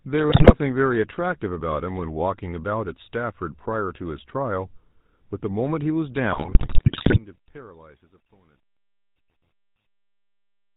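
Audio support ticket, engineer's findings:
GSM full-rate codec, whole clip: buzzy, gravelly speech, nothing above 4 kHz, consistent with a 13 kbps full-rate stream. Pulse-driven vocal-tract model coarsens excitation. Unlike plain band-limiting, the roughness sits inside the voice itself.

GSM bit errors, 0.30–0.55 s and 6.32–7.18 s: squawks, pops, gargling. Corrupted filter, pitch and gain parameters reaching the decoder bend the spectrum and spike level per frame. Unlike dropouts, sound turns garbled and loud.

Truncation distortion on a fade, 6.19–10.77 s, worst 7.47–10.77 s: gritty tail as the fade-out, which starts near 6 s, reaches its lowest steps. Fits an undithered 10-bit gain stage. Unlike codec grit, worsens steadily with falling level.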